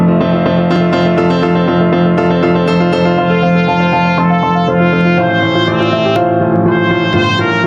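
Throughout the clip, the input gain is likely set far too high, so a fast limiter clamps down on every loud sound. This gain pumping swings the level by roughly 10 dB, bringing loud and soft parts closer in level and leaving everything squashed.

At 0.76 s, 6.16 s and 7.13 s, the program likely failed to collect its samples before the hardware overwrote them. Each dropped buffer (overrun) cuts out a few tens of milliseconds and joins the edges directly, heard as a jump in the sound.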